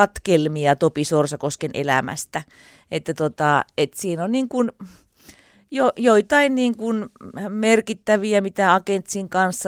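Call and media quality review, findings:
No audible faults found in the speech path; nothing to ticket.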